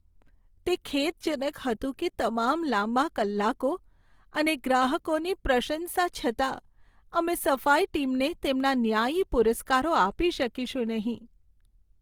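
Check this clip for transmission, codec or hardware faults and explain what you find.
One codec fault runs through the whole clip, likely Opus compression at a low bitrate, with the sound pointing to around 24 kbps in the CELT music mode. The encoder keeps each band's energy but, short of bits, fills band detail by folding lower bands or inserting noise. The speech keeps full bandwidth up to 20.3 kHz with few of the spectral holes that cause swirling, but the damage is plainly audible as a rough, grainy, noisy texture.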